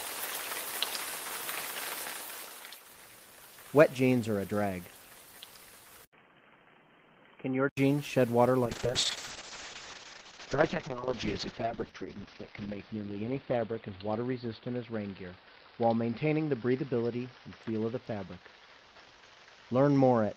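From 6.05 s to 7.77 s the input was likely switched to a poorer device. After a gap of about 80 ms, the sound loses everything above 3.2 kHz, turning dull and boxy, a little quieter, with a faint new background noise.

A call bitrate drop begins at 8.67 s and lasts to the end. The encoder's budget falls from 32 kbps to 6 kbps, staying at its lowest for 3.95 s. The bandwidth narrows from 20 kHz to 6 kHz, so the sound becomes muffled and coarse, with a rough, watery texture.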